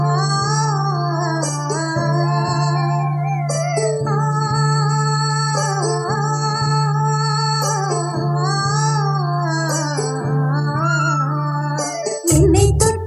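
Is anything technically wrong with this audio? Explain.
No, nothing technically wrong can be heard in this audio. There is no sign of trouble anywhere in the recording, processing or playback chain.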